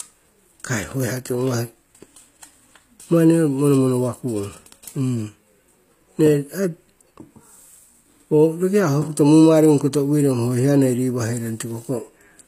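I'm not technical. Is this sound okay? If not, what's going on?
No. The recording was likely squeezed with HE-AAC compression, which rebuilds the upper treble from lower sounds, so the s sounds in the speech turn gritty and lispy throughout, with nothing above 15.4 kHz.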